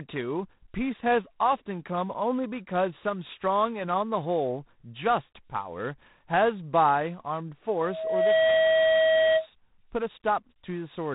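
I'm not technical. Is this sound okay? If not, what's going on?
No. G.726 ADPCM coding runs through the whole clip. This telephone-style compression stores each moment as a rough guess of how the sound changes. Here the guesses are coarse, so a harsh, rasping hiss rides along with the speech, and nothing above 3.9 kHz survives.

A loudspeaker feedback squeal runs from 7.79 to 9.47 s. A microphone picked up the speaker it was feeding, and the sound looped round and round. A steady 640 Hz tone swells up within about half a second and ends up louder than the speech.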